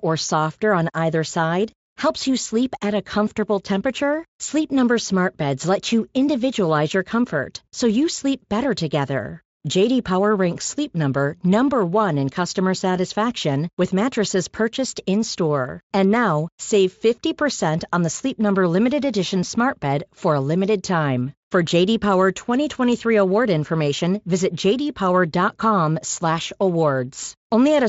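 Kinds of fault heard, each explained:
Nothing here counts as a fault, since the Speex coding on this speech sits at a comfortable 34 kbps and shows at most a faint trace of itself.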